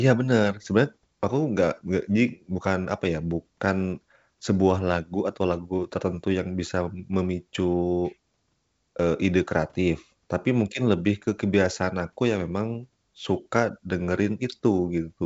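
Nothing stood out on listening to this speech clip, which carries the usual wideband telephone sound of G.722 coding at 64 kbit/s with nothing above about 7.8 kHz.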